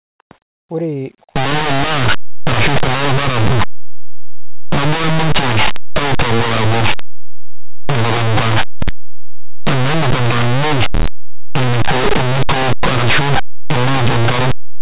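Linear audio read as companded begins at 1.36 s and lasts to the end of the speech. Plain linear 8-bit samples are being expanded as though each byte were a mu-law code. Values sitting just to one side of zero land on the very largest output levels, while their counterparts on the other side stay small. Even quiet moments therefore burst into a very loud, harsh, lopsided distortion.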